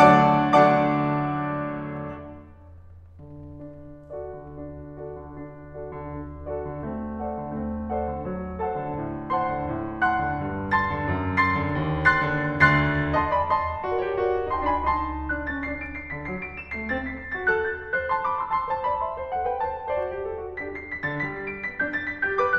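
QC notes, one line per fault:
Nothing stood out on listening to the music.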